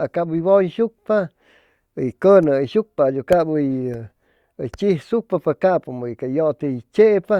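No technical faults are audible anywhere in the recording.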